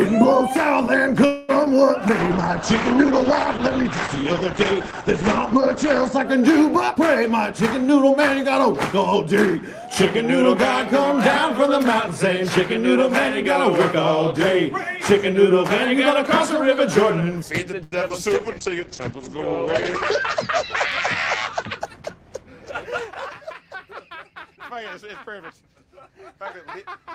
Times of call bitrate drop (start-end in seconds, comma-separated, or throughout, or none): 2.21-6.31, 18.36-21.85